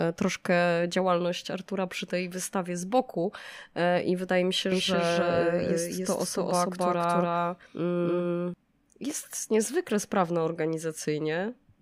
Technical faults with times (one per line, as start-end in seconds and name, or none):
4.72-8.54 doubled audio track